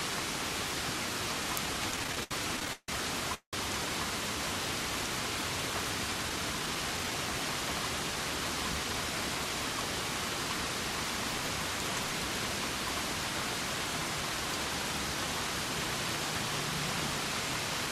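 From 1.91 to 2.90 s the sound catches and drags in fourteen small hitches, the longest about 153 ms, with roughly a third of that stretch made up of held-over sound. This is repeated stalls (stutter): packets kept arriving late, the jitter buffer ran dry again and again, and the receiver stretched the last sound each time before carrying on.

Between 3.34 and 3.55 s the audio hangs on a fading continuation, about 186 ms long, with the last 100 ms or so going silent before the sound resumes where it left off. This call audio freeze was likely caused by packets held up in transit, which emptied the buffer and pushed the playback back by that same 186 ms.

From 6.14 to 7.26 s the sound plays noticeably hurried, at about 113% speed but with its pitch unchanged. This is a jitter buffer speed-up: with surplus audio queued, the receiver repeatedly trimmed short pitch-period slices, around 150 ms in total, to bring the delay back down.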